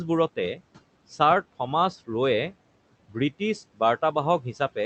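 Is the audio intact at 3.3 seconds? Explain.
No. Between 3.09 and 3.41 s the speech is cut by the noise suppressor: it judges part of the low-level speech to be noise and attenuates it along with the background, which sits about 21 dB below the speech. The gain drops by as much as about 12 dB, and roughly a tenth of a second in total is affected, so the sound around 3.3 s comes out faint and partly swallowed rather than cleanly carried through.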